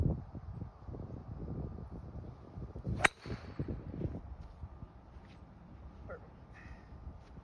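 No technical fault can be heard anywhere in the clip. Nothing in the sound points to a problem in how it was captured, processed or played back.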